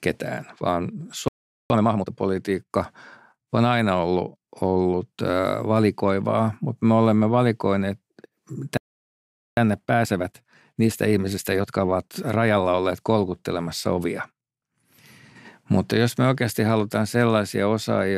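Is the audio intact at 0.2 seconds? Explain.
Yes, the audio is intact at 0.2 seconds, with nothing wrong to be heard at that moment.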